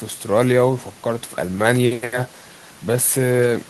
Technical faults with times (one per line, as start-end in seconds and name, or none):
none